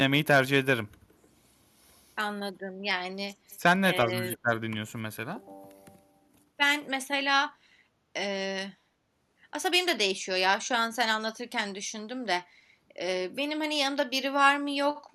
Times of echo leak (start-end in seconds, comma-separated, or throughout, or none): 3.52-3.56